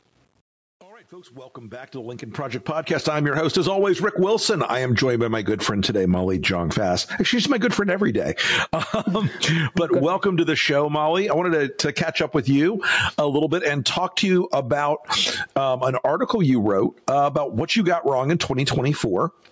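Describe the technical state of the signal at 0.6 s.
At 0.6 s the signal sits inside the opening fade-in, which rises to full level by 3.7 s, and that fade was computed by a digital volume stage that kept too few bits and added no dither, which fits a stage holding about 10 bits. This is truncation distortion on a fade, present from 0.0 to 3.70 s and worst from 0.0 to 2.08 s. At 0.6 s the level is low enough that the waveform has collapsed into a few coarse square steps, so the sound is gritty.

Gain pumping runs through the whole clip, including this moment. Its likely cause is an input gain set far too high, with a fast limiter or compressor pulling the level down on each loud sound. The gain swings by about 10 dB. Loud and soft passages are squeezed close together in level, giving a squashed, breathing quality.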